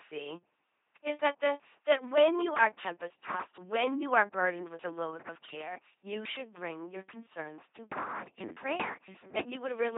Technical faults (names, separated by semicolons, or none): LPC-10 vocoder